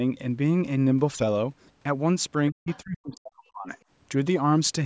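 Speech in which the talker's voice dips deeply from 2.51 to 3.69 s, falling as much as around 40 dB for roughly a second in total, likely speech suppressed in double talk, with the echo canceller turning everything down while both sides spoke. Inside that stretch, from 2.68 to 2.79 s, a faint second voice, roughly 25 dB below the talker, is likely the other side's voice leaking through as loudspeaker echo the canceller failed to remove. The call's microphone processing keeps the audio within 8 kHz.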